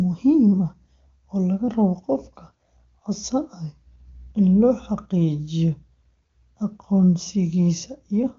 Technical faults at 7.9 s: none

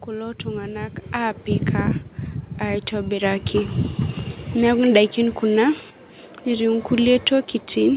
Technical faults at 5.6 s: none

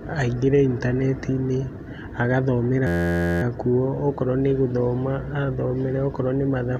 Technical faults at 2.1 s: none

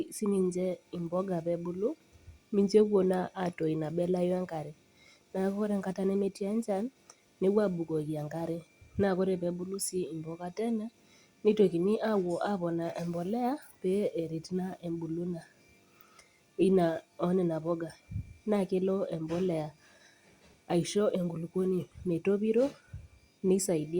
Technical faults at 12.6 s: none

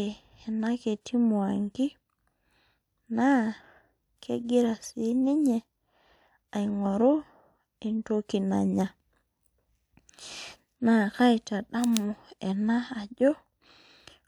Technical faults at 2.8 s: none

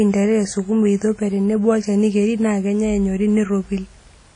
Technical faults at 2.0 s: WMA compression

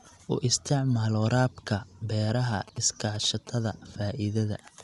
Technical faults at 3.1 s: Dolby Digital compression; GSM signalling bursts

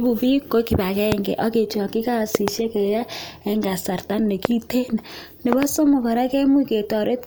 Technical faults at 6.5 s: none

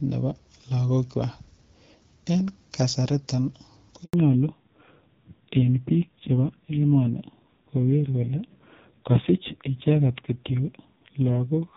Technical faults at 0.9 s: none

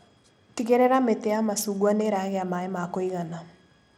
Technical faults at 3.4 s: Bluetooth SBC compression

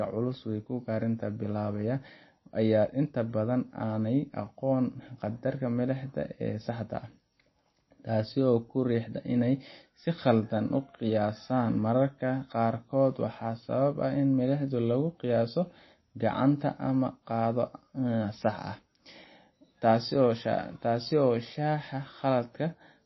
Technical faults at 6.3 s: MP3 compression

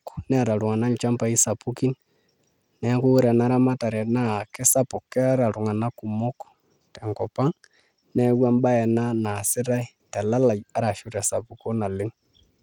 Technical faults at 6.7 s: Bluetooth SBC compression

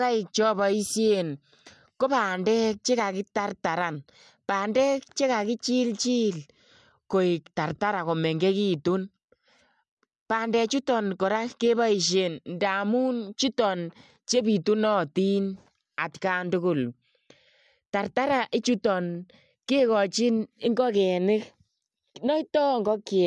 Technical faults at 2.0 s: none

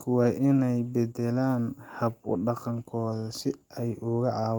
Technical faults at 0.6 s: clock drift between sender and receiver; repeated timing corrections

